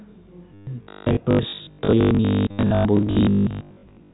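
A speech recording carried over G.711 telephone coding, so nothing above 4 kHz comes through. Packet loss with last packet repeated causes brief robotic stutters at 0.54 to 0.67 s and 2.51 to 2.59 s. These gaps of 130 ms and 80 ms fit lost 10 ms packets. From 0.83 s to the end, a rigid, metallic 50 Hz buzz sits on the sound. This is robotic sound from repeated short buffers. It is likely caused by a 20 ms buffer being replayed, with roughly half the audio repeated rather than new.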